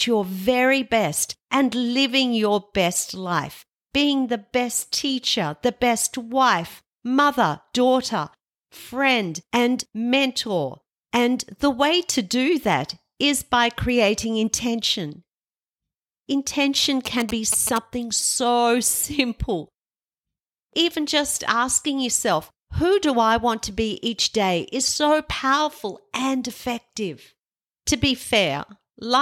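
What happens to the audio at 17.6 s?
At 17.6 s the speech is overlaid by GSM signalling bursts, which run from 17.06 to 17.78 s and stop just before "so simple". A nearby 2G phone is exchanging brief radio bursts with the network, and the audio circuitry rectifies that RF into the signal path. The result is a galloping dit-dit-dit pattern of short buzzes at about 217 Hz, sitting roughly 10 dB below the speech.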